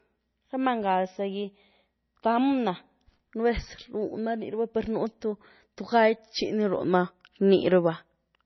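Throughout the speech, nothing sounds above about 6 kHz. The treble is cut hard, and the sound is watery and swirly. The damage is heavy. Likely MP3 compression at a low bitrate, around 24 kbps, starving the encoder and zeroing weak frequency lines.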